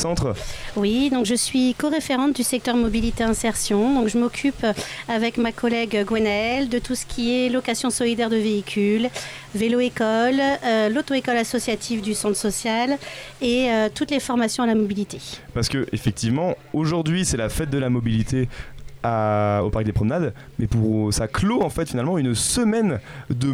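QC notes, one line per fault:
No fault found.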